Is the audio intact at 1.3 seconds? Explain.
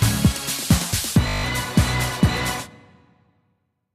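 No. From 1.28 to 1.44 s a system hang loop repeats one 20 ms slice eight times, a 50 Hz buzz showing as identical waveform cycles and harmonic stripes.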